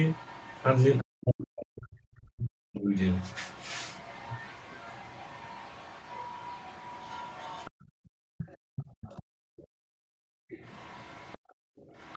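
Speech recorded over a call path whose band stops at about 8 kHz, consistent with Opus at around 20 kbps. Other side's voice leaking through is heard at 0.03 to 1.03 s, about 25 dB below the talker, and again from 2.99 s to the end, about 20 dB below. This is likely loudspeaker echo the canceller failed to remove. Speech suppressed in double talk shows as the talker dropping by up to roughly 40 dB across 1.02 to 2.9 s and briefly at 10.24 to 10.37 s, likely the canceller turning down both sides while they overlap. Background gated by the echo canceller cuts the room sound by about 40 dB from 7.71 to 9.96 s and from 11.38 s to the end, as the canceller clamps the microphone while the loudspeaker plays.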